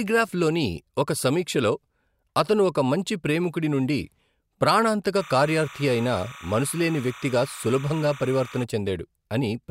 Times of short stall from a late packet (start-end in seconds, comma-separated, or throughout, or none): none